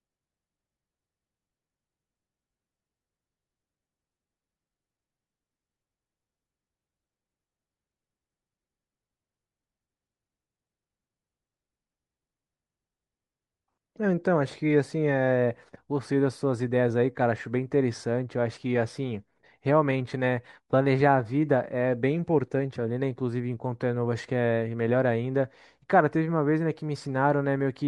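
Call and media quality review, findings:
Breathy, grainy highs throughout speech; likely Bluetooth LC3 compression noise-filling a sparse upper band, fits 10 ms frames. Steady grain, not intermittent like packet loss.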